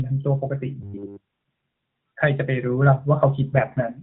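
From 0.81 to 1.25 s the speech collapses into a rigid, metallic buzz at 100 Hz. It has the sound of robotic repeated short buffers. The likely cause is late audio. The player keeps repeating a 10 ms slice instead of passing on new sound. Almost none of the real audio gets through.

From 3.56 s to the end, the speech turns rougher and more synthetic. The bandwidth does not change and there is no gap. This is an AMR rate drop. It sounds like a step down from 12.2 to 5.9 kbps, with the freed bits going to error protection. Before the drop, the narrowband AMR-NB coding leaves only light damage.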